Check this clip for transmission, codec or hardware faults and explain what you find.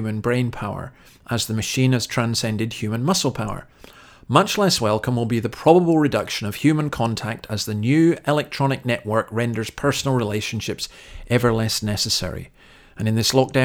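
I found no faults to report in this clip.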